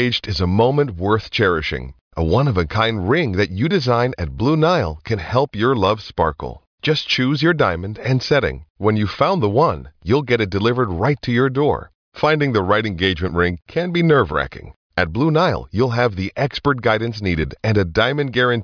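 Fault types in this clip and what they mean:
Nothing to flag here, as no technical faults turn up anywhere in the recording.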